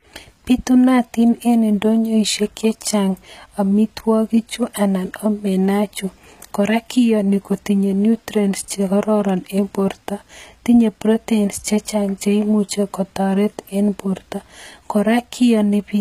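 Throughout the speech, the upper band sounds synthesized rather than lost: sibilants come out gritty and lispy, with nothing above 14.9 kHz. This is likely HE-AAC compression at a low bitrate near 20 kbps. Unlike a plain low-pass cut, the treble remains bright, copied upward from lower bands.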